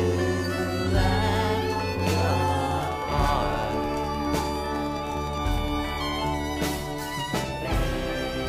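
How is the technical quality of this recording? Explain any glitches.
The recording carries Wi-Fi interference from 1.80 to 5.71 s: a steady ticking at a 102.4 ms interval, about ten per second, roughly 20 dB below the sound. A nearby Wi-Fi radio's beacon is being rectified by the audio circuitry.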